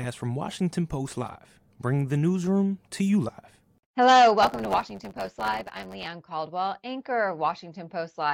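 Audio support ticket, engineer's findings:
Buzz at 100 Hz over the speech from 4.42 s to 6.06 s, with the talker running about 9% fast (1.09x) while timbre stays the same. Block size mismatch (truncated): upstream stage writes longer blocks than downstream reads, and the tail of each block is dropped every 10 ms. Those regular discontinuities produce the buzz, and the lost audio compresses the timeline. Suspect the buffer hand-off between processing stages.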